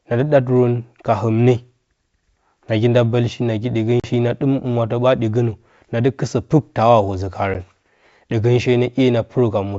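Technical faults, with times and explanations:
4.00–4.09 s, packet loss on an ADPCM call: after "nagi nda bəlshi nagi", about 40 ms, a few packets, drops to hard-edged silence. The decoder's predictor and step size then lose track of the sender, so the speech returns with a brief glitch.
7.54 s, packet loss on an ADPCM call: a single packet, about 10 ms, goes silent, and the same decoder state mismatch leaves a short disturbance at resumption.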